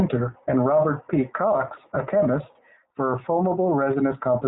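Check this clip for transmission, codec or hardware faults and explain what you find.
There's one codec fault, running the whole way through this speech. It's the iLBC codec: each 30 ms frame is coded independently, nothing passes above 3.8 kHz, and the speech sounds plainly rough and synthetic, which fits the lower 13.33 kbps mode.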